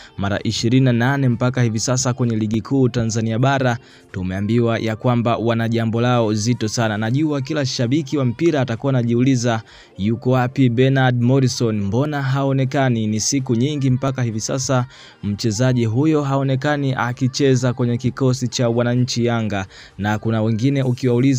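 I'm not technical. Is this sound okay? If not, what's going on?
No, there are three sharp little clicks at 2.54, 12.05 and 14.08 seconds, likely dropped samples, where just under a millisecond of audio went missing and the sound jumps.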